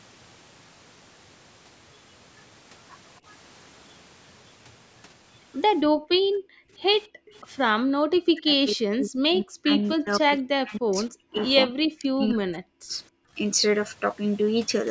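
From 5.94 to 6.79 s and again from 7.07 to 7.33 s, the room sound is pulled down by about 40 dB. This is background gated by the echo canceller, which clamps the microphone while the loudspeaker plays. Only the ambience vanishes, so it is heard as sudden silence between sounds rather than damage to the talker.

Right after the second gate, from 7.33 to 7.39 s, a very faint copy of the far side's speech slips through about 35 dB down and 269 ms late, most likely an echo leak from incomplete cancellation. It is set apart by being a delayed duplicate, not a loss.

Short gates follow at 7.76 to 7.81 s, with a drop of about 40 dB, and at 13.24 to 13.35 s, shallower at about 20 dB.

Between 8.09 and 9.71 s, 9.93 and 11.42 s, and 11.65 and 12.95 s, the talker's own voice dips deeply while the other side speaks. This is speech suppressed in double talk. The canceller likely mistook the talker for echo. 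Unlike gating, it hits the voice itself, not just the room.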